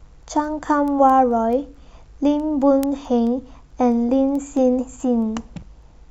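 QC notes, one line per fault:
0.23 to 6.04 s, word clock ticks: there's a run of sharp little ticks roughly every fifth of a second, around thirty of them through the speech, not all equally loud. It sounds like a digital link being read by a device on its own clock rather than locked to the sender. The two clocks drift by something like 100 ppm, so every time they slip past each other a single sample gets dropped or doubled and you hear a click.
5.59 to 5.63 s, damaged data in a compressed stream: right near the end there's a short blip, about 34 ms, sitting on top of the ticks. That's the decoder hitting corrupted bytes in the compressed stream. It misreads those frames, loses its place and has to hunt for the next frame header, so the sound briefly glitches until it picks the stream back up.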